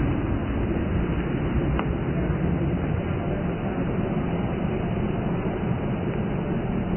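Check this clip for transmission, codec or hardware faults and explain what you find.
One codec fault runs through the whole clip: Vorbis compression, with heavy damage. Nothing is present above 3.1 kHz. The remaining treble turns hissy and grainy, and attacks smear. That points to a very low bitrate around 11 kbps, likely starving the quantised residue of detail.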